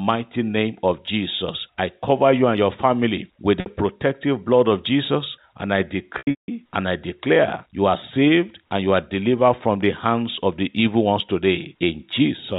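At 3.6 s, between "and your family with" and "protective blood of", there is packet loss with pitch repetition. About 60 ms of audio is lost. The receiver repeats the last pitch period to fill it, so the sound holds briefly with a buzzy edge. From 6.18 to 6.48 s, after "and I", about 270 ms is lost in scattered gaps. The longest run is 180 ms, so the repetition fades to silence. The speech cross-fades back at "and I declare you". Throughout, the G.711 telephone coding passes nothing above 4 kHz.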